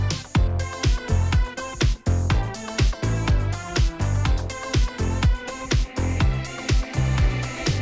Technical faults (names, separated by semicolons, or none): none